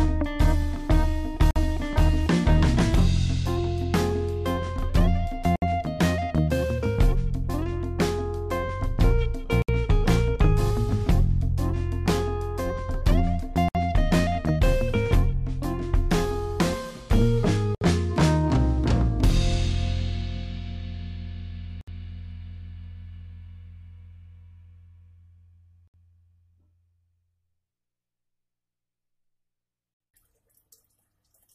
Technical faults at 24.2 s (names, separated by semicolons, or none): none